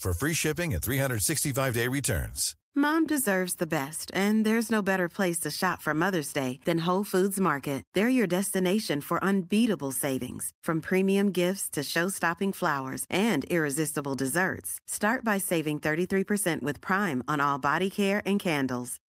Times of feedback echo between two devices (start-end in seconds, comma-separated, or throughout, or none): none